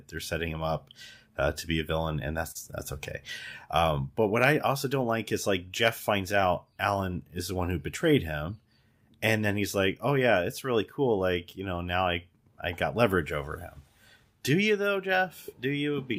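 Between "be a villain and" and "that's okay", at 2.51 to 2.57 s, short concealed packet loss leaves a brief smear. About 40 ms never arrived, and 35 ms was patched by extending the preceding sound. A spectrogram shows the preceding sound stretched across the gap.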